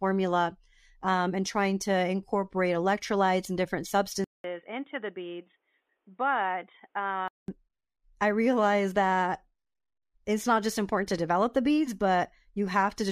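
At 4.24 s, right after "incorporate electrolytes and different", the speech cuts out for 200 ms and returns dull and boxy, somewhat quieter, with nothing above 3.8 kHz and a faint new background hiss. The full, brighter sound comes back at 7.48 s. The likely cause is an input switched to a poorer device, a second microphone or headset whose narrower band, different level and own noise took over for those three seconds.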